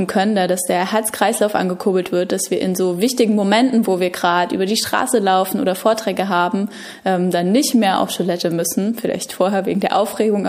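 No technical faults can be heard anywhere in this audio.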